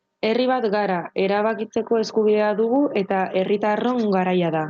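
Speech, and the whole clip has gain pumping. The gain swings by around 10 dB each time the talker gets loud. That's most likely input gain cranked too high with a fast limiter clamping down, which squashes the dynamics. The band tops out near 8 kHz, which fits a wideband Opus call leg.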